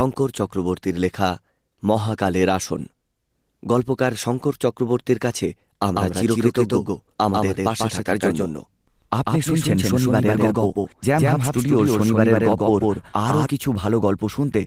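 From 5.96 s to 13.46 s the speech is heard twice: a doubled audio track, likely from a second, slower capture path, with a copy at roughly equal level trailing about 150 ms behind. It starts and stops abruptly. Spectrograms show each syllable repeated, shifted right.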